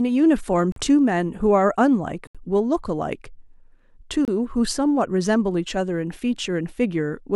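At 0.72 s, 2.27 s and 4.25 s the speech drops to silence for about 41 ms, 75 ms and 28 ms, then resumes. These are likely Bluetooth stalls, where interference delayed packets and the headphone buffer emptied before retransmissions arrived.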